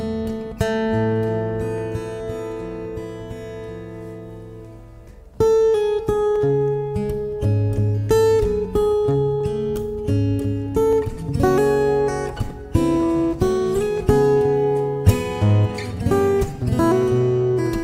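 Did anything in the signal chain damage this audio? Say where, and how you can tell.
Yes, at the driver or buffer stage: clicks every 1.52 s from 0.26 to 17.02 s point to clock drift buffer slips, likely from two clocks about 100 ppm apart. Random dropouts would not keep such steady spacing.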